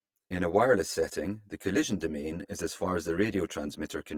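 From start to finish the speech carries channel delay (comb filtering). One channel trails the other by around 10 ms, and when the two are summed to mono the shared sound cancels at regularly spaced frequencies, with the first notch near 50 Hz and further notches every 100 Hz above it. The result is a hollow, slightly phasey colouring. Unlike a flanger or phaser, the notches stay fixed rather than sweeping, and unlike room reverb there is no audible tail.

Also present throughout is coding damage that is plainly audible and most likely comes from Opus compression in its music (CELT) mode, at a low rate that fits roughly 24 kbps. The full bandwidth is kept, so the speech is not muffled or hoarse as it would be in the speech mode. Instead, voiced sounds turn rough, grainy and noisy where bands have been filled with folded or noise content. That graininess, without the watery swirl of MP3, is what points to Opus.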